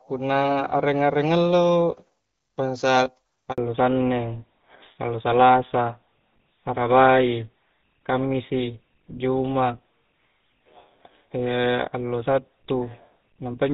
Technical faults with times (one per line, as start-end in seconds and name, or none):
3.52-3.58 handover gap
3.58-13.74 fallback to narrowband